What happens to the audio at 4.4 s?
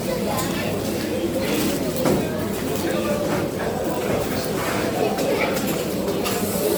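Generation loss is present at 4.4 s, as it is from start to finish. The sound at that moment is swirly, smeared and hollow, with blurred attacks. The likely cause is repeated lossy re-encoding, around four passes through MP3 at a rate that points to about 96 kbit/s. Each pass quantised the audio again on a shifted frame grid, so noise and spectral gaps piled up beyond what a single encode would leave.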